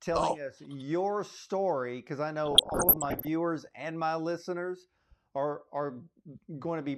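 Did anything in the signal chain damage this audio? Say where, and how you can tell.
Yes. DAB burbling from 2.46 to 3.27 s in this speech clip: weak reception let bit errors, pointing to a rate around one percent, slip past error correction into the MP2 codec data, so corrupted samples give short noise blips in single sub-bands and corrupted scale factors make individual sub-bands jump in level for up to a frame.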